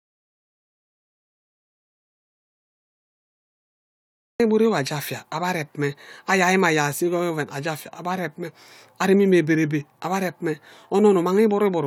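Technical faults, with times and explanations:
0.0–4.4 s, audio dropout to silence: the clip opens already in dead digital silence, with no room tone or noise floor, and speech cuts in abruptly at 4.4 s. This likely reflects a lost input while the recorder kept writing silence, so earlier material is gone.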